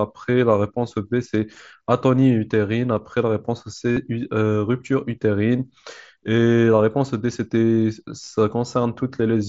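At 3.93 s, about 45 ms of concealed Bluetooth headset packet loss: lost audio is refilled by repeating recent waveform, giving a brief buzzy tone with frozen spectrogram harmonics and identical, full-level waveform cycles. At 8.23 s, shorter gaps scattered over 60 ms (longest 15 ms) leave faint warbles.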